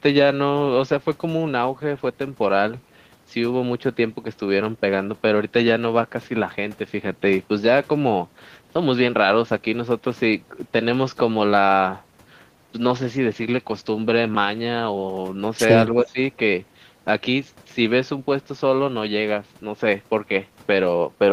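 From 15.93 to 16.18 s, an echo canceller likely mistook the near talker for loudspeaker echo while both sides spoke, and turned everything down. This speech suppressed in double talk makes the speech dip by roughly 10 dB for about 150 ms in total.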